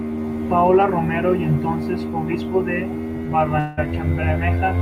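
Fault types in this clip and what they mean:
Long network dropout: speech breaks off at 3.59 s and a fading buzz fills the gap to 3.79 s, with no silence, likely from lost packets; the missing stretch never returns.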